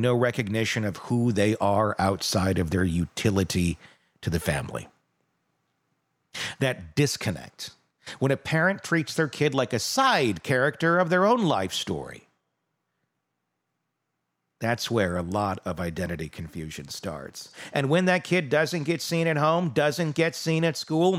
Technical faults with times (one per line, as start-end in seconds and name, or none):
none